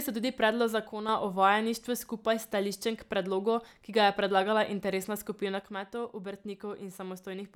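One channel drops out from 0.89 to 1.09 s and again from 5.62 s to the end: the speech level falls abruptly by about 6 dB, likely because one stereo side went silent, so the mono sum carries only half the shared signal.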